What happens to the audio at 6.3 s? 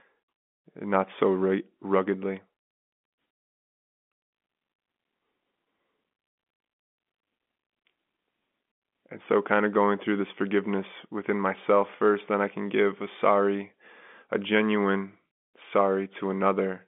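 Nothing goes wrong at 6.3 s; the speech carries on intact there, heard through the narrow telephone band of its G.711 coding.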